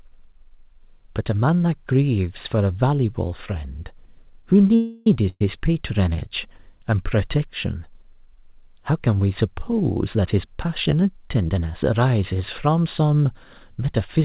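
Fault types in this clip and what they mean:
Call audio freeze: From 4.75 to 5.07 s the sound stops advancing, and the last moment is stretched into a fading buzz or hiss for about 311 ms without dropping to silence. Afterwards the speech picks up exactly where it left off, with nothing skipped and the whole clip now running about 311 ms later. The likely cause is packets held up in transit until the jitter buffer ran dry. Unlike packet loss, this adds a gap without removing any audio.
Burst of packet loss: At 5.29 to 5.41 s a short stretch of about 110 ms is gone for good. The receiver covers it by continuing the last sound for about 112 ms while turning it down, and the fill fades to silence for its last 40 ms or so. The speech then resumes further on, with the missing piece simply absent. Unlike the freeze just before it, this one takes audio out rather than pushing it later.
Jitter buffer speed-up: Between 9.94 and 11.91 s the speech runs at about 116% of normal pace but keeps the same pitch, so it sounds hurried rather than higher. 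Tiny slices, each a pitch period or a few long, are cut out again and again, adding up to roughly a third of a second. This reins in a buffer that had grown too full, and the band stops at 4 kHz throughout, as expected on a G.711-style call path.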